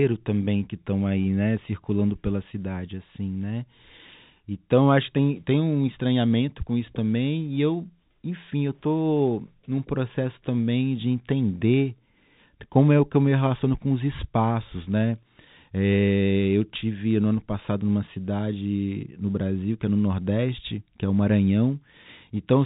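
Nothing stood out on listening to this speech recording, which carries the narrow band of ordinary telephone audio with nothing heard above about 3.8 kHz.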